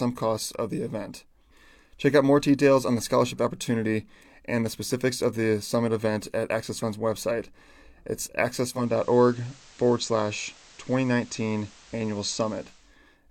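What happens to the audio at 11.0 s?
At 11.0 s the speech is inside a digital radio blend to analogue, running from 8.58 to 13.0 s. The receiver lost its digital stream and cross-faded over about half a second to FM, and hiss sits roughly 25 dB down. A spectrogram shows a raised noise floor; the waveform level stays unchanged.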